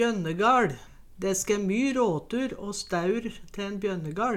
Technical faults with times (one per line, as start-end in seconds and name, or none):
none